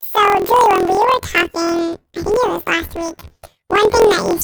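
From start to end, the speech has a planar audio read as interleaved fault. Each 24 ms block holds one channel's samples, then the other's, but is read as alternating pairs. Each block plays twice, at double speed. The sound is an octave high, with a robotic buzz at 41.7 Hz.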